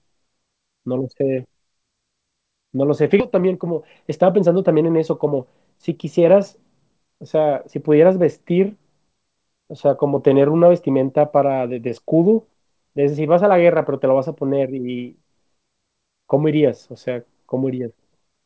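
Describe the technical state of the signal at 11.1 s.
At 11.1 s the speech is intact, with no dropout, glitch or distortion, only the steady band limit of the call path, which carries nothing above 8 kHz, as fits a wideband codec such as G.722.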